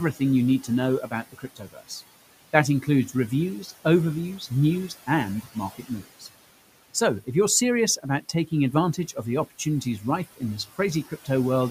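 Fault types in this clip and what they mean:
noise suppressor artifacts: The suppressor is pulling down whatever it judges to be steady background, band by band and frame by frame, by about 17 dB here. So the room noise, which sits about 18 dB under the speech, dips in the gaps and creeps back up under the talking.
speech cut by the noise suppressor: In three stretches, 0.13 to 3.7 s, 4.39 to 6.28 s, and 7.97 to 11.28 s (that last one starting right after "if you're serious"), the suppressor mistakes bits of speech for noise and ducks them with the background, by up to about 15 to 16 dB. It adds up to a little under a second in the first stretch and under half a second in each of the others, so soft consonants and word tails come out swallowed or faint.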